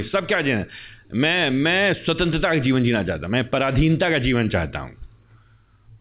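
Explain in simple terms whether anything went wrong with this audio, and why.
Nothing went wrong here: the speech came over an ordinary internet call connection that worked as intended, and the traces of that route are the call's usual coding noise and the familiar narrow telephone sound with nothing above 4 kHz, which fits a standard phone-grade codec such as G.711 A-law.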